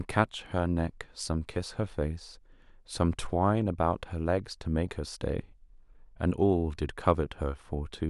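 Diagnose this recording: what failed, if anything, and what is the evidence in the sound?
Nothing failed here: listening through the speech, there's no audible evidence of trouble at any stage of the chain, so there's nothing to diagnose.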